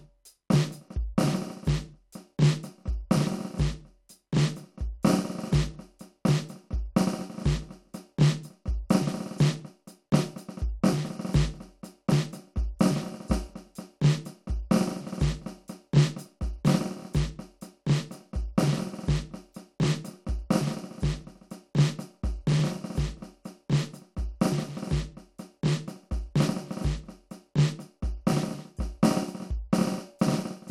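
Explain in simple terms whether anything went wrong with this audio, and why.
Nothing went wrong with this bit of music; there's no glitch, dropout or other technical fault to point to anywhere in it.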